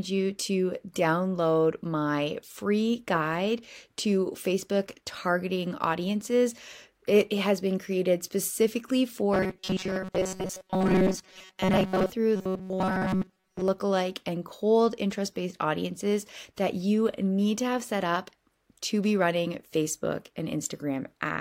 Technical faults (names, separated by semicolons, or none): robotic sound from repeated short buffers